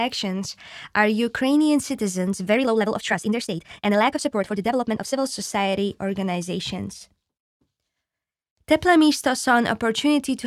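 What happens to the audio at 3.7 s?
At 3.7 s the speech is in the middle of a rushed stretch running from about 2.50 to 5.18 s. The pace jumps to roughly 1.76 times normal while the pitch stays put, then settles back just before "society organizations". This is a time-stretched section: the likely cause is software squeezing the passage to fit a shorter length, keeping pitch by dropping short slices of audio, which leaves the hurried texture.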